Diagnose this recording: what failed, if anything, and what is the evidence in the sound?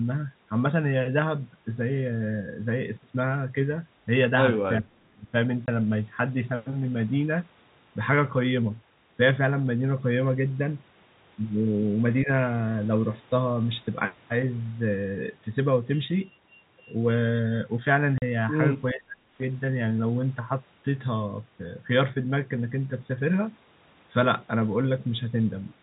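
Call processing is the stage at fault here: this looks like speech suppressed in double talk. The speech dips hard between 4.80 and 5.33 s, falling by something like 30 dB at its deepest, then again from 18.93 to 19.24 s at a similar depth, plus a lighter dip of around 10 dB at 12.24–12.29 s. The likely cause is the echo canceller hearing both sides at once, failing to tell the near talker from loudspeaker echo, and ducking everything.

Tucked inside that first dip, around 4.85–4.92 s, there's a faint echo leak: a copy of the sound arriving about 410 ms late and sitting far below the speech, roughly 35 dB down. It's the same call-processing stage, likely a speakerphone whose echo canceller let a scrap of what its mic picked up slip back through, just as it was struggling with the double talk.

On the network side there's packet loss filled with silence. A short hard-edged hole lands at 5.66 s, about 20 ms long, which fits one lost 20 ms packet. 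A longer one runs from 18.18 to 18.22 s, 40 ms, consistent with two packets back to back. The receiver plays dead silence in each gap instead of concealing it, so you get abrupt cut-ins with hard edges, all riding on the band-limited G.711 telephone sound that stops at 4 kHz.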